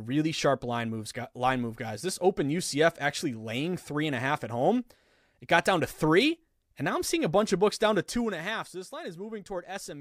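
Right after "a bunch of books", from 7.84 to 8.36 s, there's zipper noise: the speech gets pulled down by roughly 10 dB in unsmoothed 1 dB steps, around twenty a second, so a fine ticking zip rides on it until "a half".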